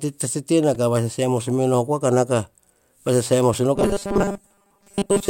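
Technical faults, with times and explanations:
0.75 s, repeated buffer: a 2.9 ms slice of audio, which fits a 128-sample buffer, plays three extra times back to back because fresh audio arrived late. With so short a segment, the stutter is heard as a sharp click or tiny buzz rather than a repeated syllable, and almost nothing is skipped. On the waveform, four identical short blocks sit side by side with abrupt joins. On the spectrogram, a thin vertical broadband streak marks the spot.
3.76 s to the end (5.29 s), robotic sound from repeated short buffers: the speech turns into a rigid, metallic buzz locked at 200 Hz. It still loosely follows the rhythm of the talking. This is likely caused by audio arriving too seldom, with most of the time filled by replaying the last 5 ms chunk while the real signal is skipped. The waveform shows the same 5 ms cycle copied over and over. The spectrogram shows flat, evenly spaced horizontal lines at multiples of 200 Hz in place of the usual moving harmonics.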